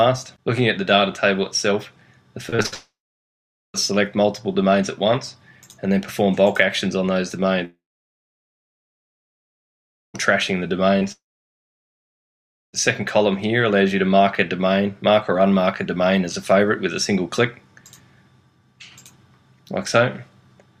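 From 2.49 to 2.74 s there is repeated packet loss, heard as robotic sound. Four gaps, the longest 57 ms, were each patched by extending the last sound, so the audio turns choppy and robotic. On a spectrogram this shows as smeared, repeated frames.

At 2.74 s a long network dropout begins. No fresh audio arrives, and a short fading buzz or hiss gives way to about 0.82 s of near-silence before the sound returns at 3.76 s with that stretch missing. The waveform collapses to a low, nearly flat trace. This is likely caused by the stream stalling in transit.

A second long network dropout runs from 7.65 to 10.16 s. A fading tail leads into about 2.35 s of near-silence, a long empty band on the spectrogram. Its likely cause is packets not reaching the receiver.

From 11.00 to 11.03 s a short concealed packet loss leaves a brief smear or wobble where 10 ms was filled in. It shows as a thin blurred slice.

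A third long network dropout spans 11.12 to 12.75 s. A brief decaying continuation leads into about 1.53 s of near-silence, and the audio resumes without the lost part. This again likely comes from audio failing to arrive over the network.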